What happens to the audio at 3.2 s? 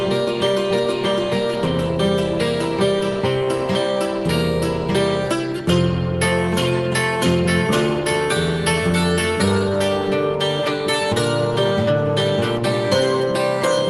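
Nothing goes wrong at 3.2 s: the audio there passes through the call path intact, with no dropout, glitch or other fault at that moment.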